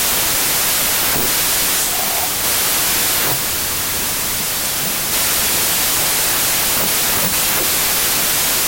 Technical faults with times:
0.00-8.67 wrong sample width

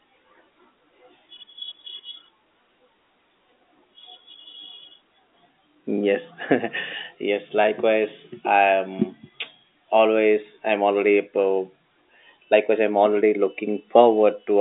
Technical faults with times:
none

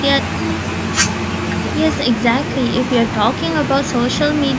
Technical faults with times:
none

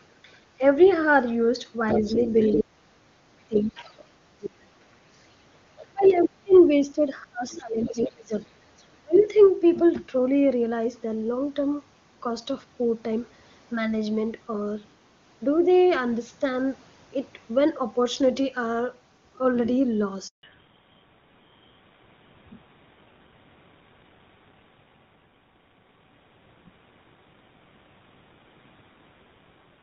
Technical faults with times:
1.92-2.58 other side's voice leaking through
2.02-4.69 speech suppressed in double talk
3.56-4.02 other side's voice leaking through
5.80-9.27 speech suppressed in double talk
5.81-6.57 other side's voice leaking through
7.53-9.25 other side's voice leaking through
20.27-20.43 handover gap
20.43-29.83 fallback to narrowband

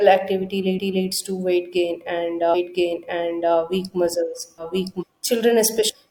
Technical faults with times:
4.97-5.03 damaged data in a compressed stream

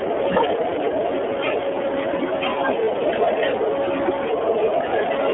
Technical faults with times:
0.00-5.33 iLBC codec
2.85-2.89 lost iLBC frames

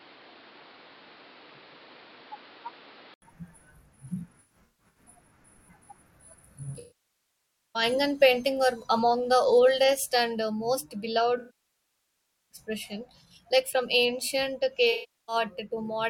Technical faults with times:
0.00-3.22 input switched to a poorer device
4.23-5.05 AAC frame loss with concealment
6.79-7.83 AAC frame loss with concealment
11.37-12.58 AAC frame loss with concealment
14.92-15.36 AAC frame loss with concealment

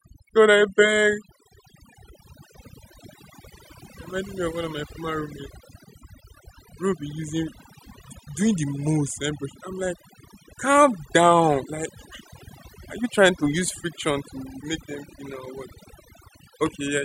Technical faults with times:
0.00-17.05 overdone noise removal

